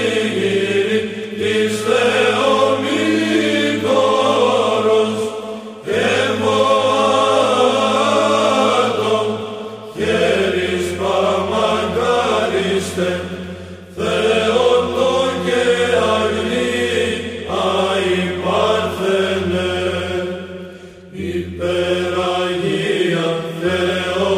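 At 21.76 s there's a bit error spike: a single flipped bit in one sample throws out a sharp tick around -23 dBFS, unrelated to the sound underneath.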